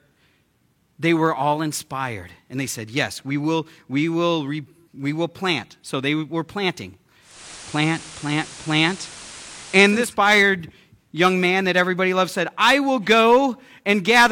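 At 7.20 s, just after "they were planting", the receiver lost its digital signal and blended over about 307 ms to the station's FM broadcast. Hiss rises to roughly 20 dB below the speech, and the level shifts by about 3 dB until the return at 10.15 s.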